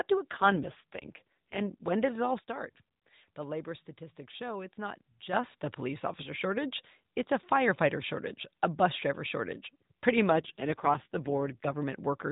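From 0.32 to 1.87 s, an AMR rate drop occurs: a weak radio link pushes the codec onto fewer speech bits, which fits a switch from 12.2 to 4.75 kbps. The band stays just as narrow and nothing drops out, but the voice turns rougher and more synthetic, then clears.

At 2.39 s, a sudden gain jump, likely a digital gain setting applied without a ramp, cuts the level by about 9 dB in one step. Speech and background noise drop together and stay lower until 5.33 s, when the level snaps back.

From 10.30 to 11.75 s the same AMR rate drop recurs, again consistent with 12.2 falling to 4.75 kbps, bringing back the coarse, synthetic roughness before the fuller rate returns.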